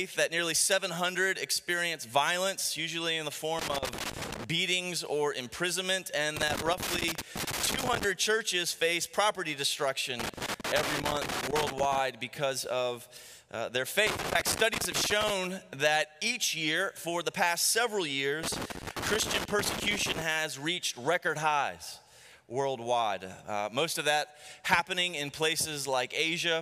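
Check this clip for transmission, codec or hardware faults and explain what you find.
Loose connector crackle appears five times: 3.59 to 4.44 s, 6.37 to 8.04 s, 10.20 to 11.99 s, 14.07 to 15.30 s, and 18.43 to 20.22 s. Each burst lasts roughly one to two seconds. A worn or dirty contact is opening and closing many times a second. That chops the signal into fragments, and each make or break can add a pop. The result is irregular scratching and crackle over the sound.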